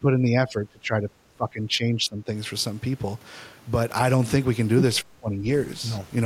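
From the start to 1.12 s, then 1.29 to 2.32 s, and again 5.01 to 5.49 s, the speech sinks under itself, dropping roughly 20 dB in the first two stretches and nearer 30 dB in the last. That's speech suppressed in double talk: likely an echo canceller mistaking the talker for loudspeaker echo and ducking everything.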